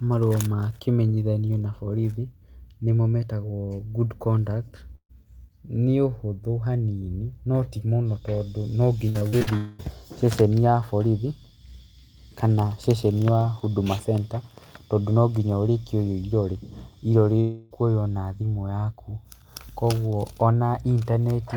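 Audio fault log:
4.95–5.11 s, burst of packet loss: just after "good conduct", about 140 ms of speech is gone. The last sound is stretched and fades out, then about 70 ms of silence follows before speech resumes further on. It is a single short hole, not a run of breaks.
9.09–9.49 s, repeated packet loss (robotic sound): after "notimũno tondũ", five separate holes totalling 180 ms, the longest 55 ms, are each patched by extending the preceding sound. Nearly half the stretch is synthetic, so it sounds choppy rather than like one clean gap.
9.57–9.81 s and 17.41–17.72 s, long network dropout: the first ends right before "ceceni ya borithi", about 220 ms lost. The second loses about 300 ms. In both, a held sound decays across the whole gap with no silence. The likely cause is a single long network outage, not scattered losses.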